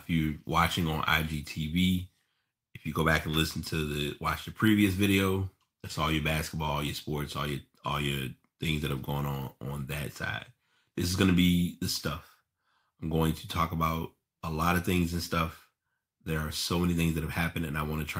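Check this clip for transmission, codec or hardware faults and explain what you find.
Listening through the speech, I hear no transmission, codec or hardware faults in the signal's technical state.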